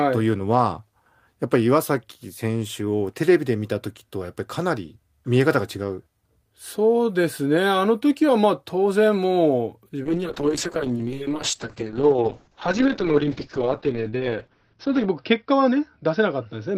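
A call bitrate drop begins at 10.05 s and lasts to the end of the clip. The encoder's rate falls from 32 kbps to 7 kbps after the call's bandwidth estimate collapses, and it sits at that floor for about 5 s. With so few bits, the codec quantises the speech coarsely and narrows the audio band from 20 kHz to 6 kHz, so the voice turns muffled, rough and watery, losing its crisp consonants without recovering before the clip ends.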